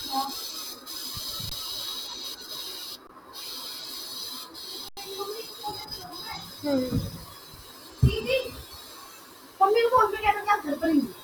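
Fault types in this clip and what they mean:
Underrun with held sample: the buffer emptied and held its last value, stalling the speech flat for 21 ms twice and 85 ms once before resuming where it stopped.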